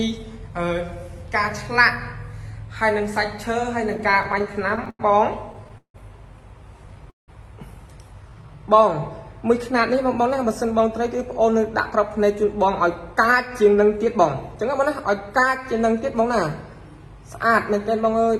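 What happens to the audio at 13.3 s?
At 13.3 s the receiver is in the middle of a jitter buffer speed-up that runs from 10.21 to 15.81 s. Its buffer had built up more audio than it aims to hold, so it trims tiny slices, each a pitch period or so long, over and over until about a third of a second is gone. The sound plays roughly 6% fast with unchanged pitch, so it comes across as slightly hurried and rushed in its timing.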